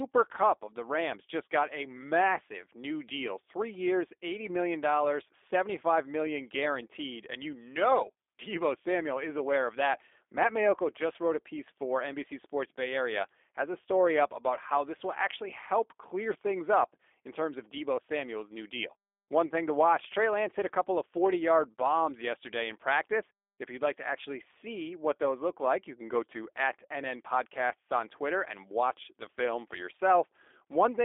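From the first second to the last the speech carries G.729 codec damage, plainly audible. The sound is rebuilt from a vocal tract filter, a pitch predictor and a few pulses per subframe, which fits a G.729A stream at 8 kbit/s, so it comes out rough and slightly synthetic. The line band runs roughly 300 Hz to 3.6 kHz. A spectrogram shows a hard ceiling with nothing above 3.7 kHz and a thin, empty floor beneath 300 Hz.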